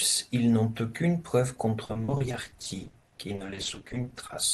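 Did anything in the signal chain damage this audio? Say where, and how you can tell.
Yes, at the network stage: repeated packet loss gives a robotic sound from 1.84 to 4.35 s. Dozens of short holes, none longer than 40 ms, were concealed by extending the previous sound, about 41% of that stretch, so the speech turns choppy.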